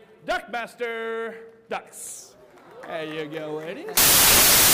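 At 3.97 s the audio turns to samples built from the wrong bytes, continuing to the end at 4.74 s. The reader assembles each sample's bytes misaligned or in swapped order, so the rapidly varying low bits dominate, producing loud, harsh broadband noise.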